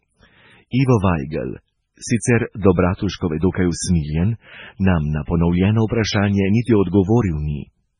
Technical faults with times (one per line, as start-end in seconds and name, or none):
0.00-7.99 MP3 compression